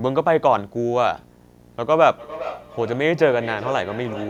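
A 60 Hz buzz with hash above it runs well below the speech throughout: video or display buzz, where a screen or video cable couples into the audio. From 1.82 s to the end, speech comes round again roughly every 400 ms, peaking about 14 dB below the speech. This is feedback echo between two devices: one plays what the other's microphone sent, and that microphone picks it up again.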